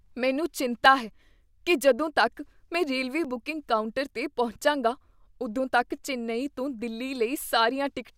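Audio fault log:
0.86 s, dropped buffer (overrun): the capture side likely failed to read its samples before the hardware overwrote them, so roughly 10 ms of speech is gone and the two edges are butted together. There is no gap, just a skip just before "ਹੈ ਕੀ ਜਦੋਂ ਤੱਕ".
3.25 s, dropped buffer (overrun): the same missed read, likely, loses only a few milliseconds between "ਜਦੋਂ ਤੱਕ ਮੈਂ ਰੇਲਵੇ" and "ਬੁਕਿੰਗ ਕਾਊਂਟਰ 'ਤੇ ਪਹੁੰਚਾਂਗਾ", heard as a jump.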